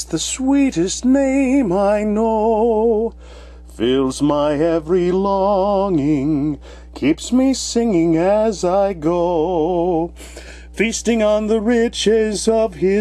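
Mains hum runs from the first second to the last. It is a steady low tone at 60 Hz, sitting roughly 20 dB below the main sound. It never changes pitch or level. The likely cause is a ground loop or a nearby transformer letting the power line leak into the signal path. The 60 Hz figure points to a 60 Hz supply.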